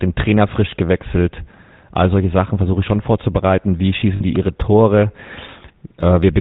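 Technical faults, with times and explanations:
Throughout: GSM full-rate codec. The sound is buzzy and gravelly, with nothing above 4 kHz. Pulse-driven vocal-tract modelling fits 13 kbps full-rate coding.
4.16 to 4.22 s: lost GSM frames. A 40 ms gap, about two frames' worth, is filled by repeating the last good frame, giving a brief rough, metallic ring.
4.36 s: electrical switching spike. A sharp snap sits on top of the sound, likely an arc from a nearby switch or static discharge picked up by the line.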